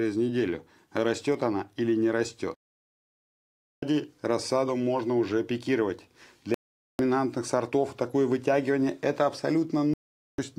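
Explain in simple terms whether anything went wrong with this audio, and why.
The receiver lost the digital signal, or received data it couldn't trust, so it muted until clean data came back. This is a digital broadcast dropout. The sound cuts to silence three times: from 2.54 to 3.83 s, the longest gap at about 1.3 seconds, then from 6.54 to 7.00 s and from 9.94 to 10.39 s, each just under half a second. Whatever was broadcast during those gaps is gone, and the sound resumes further along.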